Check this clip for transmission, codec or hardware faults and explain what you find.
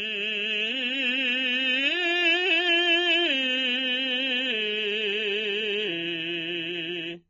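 One fault is present throughout this music. Nothing sounds above 6.9 kHz, and sustained tones smear and warble. This is likely AAC compression at a low bitrate, consistent with 24 kbps. The encoder drops the top band and coarsely quantises what remains.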